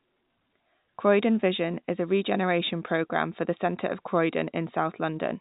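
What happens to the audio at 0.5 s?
Nothing goes wrong at 0.5 s: the speech carries on intact through the G.711 telephone coding, with no dropout, click or other fault at that moment.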